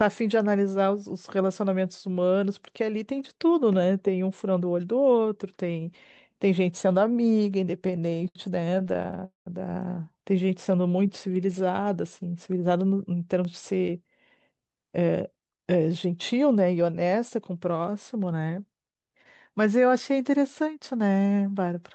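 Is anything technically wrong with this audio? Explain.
Yes. This speech comes through an Opus call path limited to about 8 kHz, and several delivery faults are audible.

From 7.82 to 9.19 s there are repeated stalls (stutter): about two dozen brief holds, the longest 70 ms, totalling 308 ms, about a quarter of that stretch. Packets arrived late, so the jitter buffer kept emptying and the receiver stretched the last sound each time. Nothing is lost, but the speech drags and hiccups. Unlike one freeze, the interruptions are many and short.

From 9.25 to 9.47 s comes a call audio freeze. A single hold of 213 ms buzzes briefly, then fades to about 150 ms of silence before speech resumes where it left off. The likely cause is packets held up in transit, which added 213 ms of delay. It is one longer stop rather than a run of small ones.

From 10.36 to 11.59 s a jitter buffer slow-down plays the speech at 92% speed. 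Repeated pitch periods add 109 ms, so sounds are drawn out at unchanged pitch. Unlike the stalls, nothing stops; it is a smooth slowing.

At 13.45 s there is a block of digital silence: a 0.67 ms dropout with no fade, heard as a tick. The output buffer was likely not filled in time. Its edges are hard, not the fading fill of concealment.

From 14.51 to 15.67 s (110% speed, about 100 ms removed) and from 20.60 to 21.00 s (108%, about 40 ms removed), a jitter buffer speed-up trims short pitch-period pieces to cut excess delay. The speech sounds hurried at the same pitch, the opposite of the earlier slow-down.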